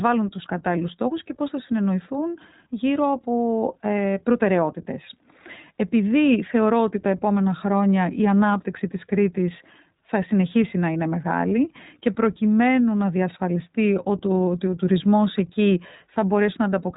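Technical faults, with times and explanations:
Throughout, iLBC codec: the whole speech clip has been squeezed into a narrowband channel, so nothing survives above 4 kHz, and the spectrogram shows a hard ceiling there with empty space above it. Each short frame is coded on its own, and the plainly audible damage is a rough, slightly synthetic quality on the speech, which fits 20 ms frames at around 15 kbps.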